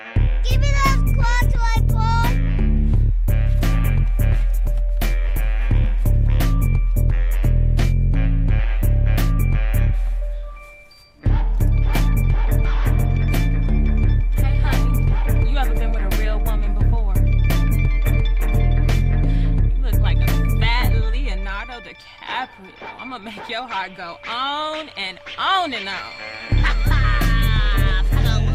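No technical faults can be heard anywhere in the recording.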